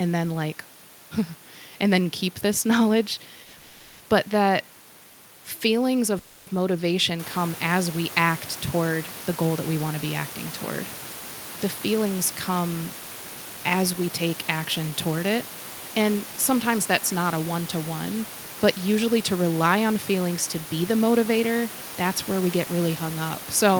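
Call audio freezes occur at 3.43 to 3.56 s, 3.57 to 4.03 s and 6.19 to 6.50 s, filling about 100, 430 and 280 ms. The speech halts and the last sound is stretched into a fading buzz or hiss, never dropping to silence. Each is likely caused by delayed packets that left the jitter buffer empty. When they arrive, the speech picks up where it stopped, so nothing is lost but the delay grows by each gap's length.

Jitter buffer speed-up follows at 11.92 to 12.64 s (about 106 % speed), 13.36 to 15.38 s (about 111 %) and 22.41 to 22.96 s (about 111 %). The buffer held more audio than it aims for, and the receiver drained it by snipping out pitch-period-length pieces again and again, roughly 50 ms, a fifth of a second and 70 ms in total. The pitch holds steady but the speech sounds rushed. This happens over room noise that rises about 12 dB near 7 s and stays about 17 dB below the speech.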